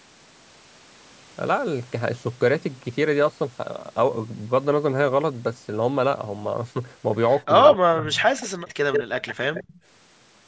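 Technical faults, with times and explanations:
7.65–7.72 s, 8.38–8.48 s, 8.69–8.73 s, 8.93–9.03 s, 9.27–9.35 s and 9.54–9.80 s: echo leak. A copy of the speech returns 141 ms late each time, in short scraps. The first is about as loud as the speech itself, the one near 8.93 s is almost as strong, those near 9.27 and 9.54 s are clearly quieter, and the ones near 8.38 and 8.69 s are faint to barely audible. The likely cause is a loudspeaker on the far end whose echo canceller let part of the played-back audio into its microphone and sent it back.
7.72–8.22 s: speech suppressed in double talk. For about half a second the speech sinks sharply, at its deepest by roughly 40 dB, so it nearly vanishes in patches. This comes right after the first loud echo, while both ends are active at once. The likely cause is an echo canceller that could not separate the local talker from the returning echo and turned everything down together.
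8.57–8.69 s: background gated by the echo canceller. The room sound briefly drops by about 11 dB for roughly a tenth of a second, then returns. The canceller clamped the microphone hard while the loudspeaker was playing and released it a moment later, which leaves a short hole in the ambience between the echo scraps.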